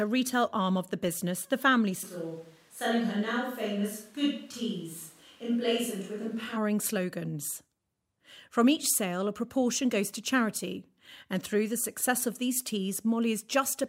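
A speech recording with a switch to a distant microphone from 2.05 s to 6.56 s, where the sound turns abruptly roomy and hollow, thinner in the bass and about 5 dB quieter, with room noise sitting some 35 dB below the speech. The likely cause is the close microphone dropping out. The waveform shows a step down in amplitude at the start and a step back up at the end, and the spectrogram shows weaker low frequencies, smeared reverberant tails and a raised noise floor across that span.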